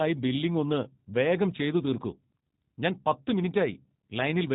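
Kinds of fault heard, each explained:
G.729 codec: a low-rate VoIP codec rebuilt this speech from a filter model and sparse pulses, likely at 8 kbit/s, cutting everything above 4 kHz and leaving a plainly rough, synthetic edge.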